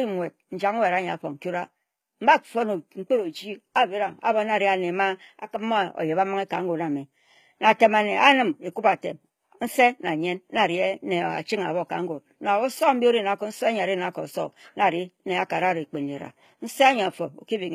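From start to finish the speech has a gritty, metallic treble, with s sounds turning lispy. This points to HE-AAC compression, likely at a low bitrate around 20 kbps, where the upper band is rebuilt from copied lower frequencies whose harmonics no longer line up.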